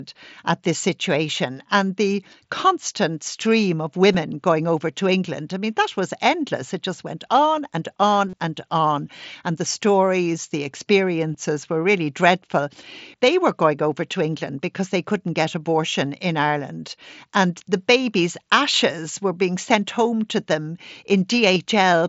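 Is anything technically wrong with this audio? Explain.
Yes. There is concealed Bluetooth headset packet loss at 4.13 s, 8.29 to 8.33 s, 11.34 s and 21.55 s. Audio packets from the wideband mSBC headset link went missing. The receiver filled each gap by repeating the best-matching slice of recent waveform. The gap at 11.34 s is a single lost packet and nearly hidden. The two-packet gaps at 4.13 s and 21.55 s and the longer one at 8.29 s give a brief buzzy tone, then a slight warble as real audio resumes.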